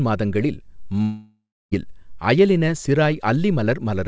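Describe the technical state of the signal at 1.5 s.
At 1.5 s the signal sits inside a long network dropout, likely lost packets, running from 1.02 to 1.73 s. The receiver stretches the last sound into a fading buzz, leaving about 0.3 s of near-silence before the speech resumes with roughly 0.7 s missing.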